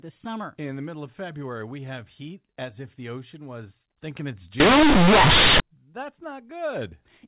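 From 4.6 s to 5.6 s, just after "ocean was thinking it's", the speech turns into a harsh, very loud, buzzing roar. This is companded audio read as linear: the A-law bytes are being played as plain 8-bit samples without expansion, so every sign change throws the output across roughly half its range. Quiet passages come out as large as loud ones, the waveform is badly bent, and noise fills the gaps. The surrounding G.711 telephone coding at 8,000 samples a second can be heard in its usual band limit below 4 kHz.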